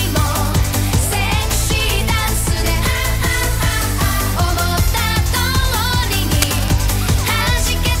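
From 6.35 to 6.68 s, cable scratch noise rasps over the sound, likely from a worn connector shifting. On a spectrogram it appears as a ragged broadband smear, roughly 10 dB below the signal.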